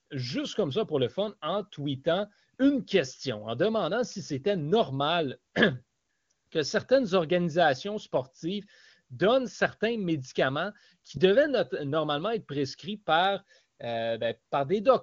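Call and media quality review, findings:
No findings for this call and media quality review; nothing on the AMR wideband (HD Voice) path needs a ticket.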